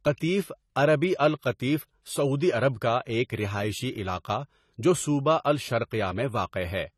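Speech throughout shows plainly audible AAC compression damage, likely from AAC-LC encoding: nothing is present above 14.1 kHz, and the coarse quantisation leaves a dull, smeared tone with fizzy, warbling sibilants, which fits a bitrate around 32 kbps.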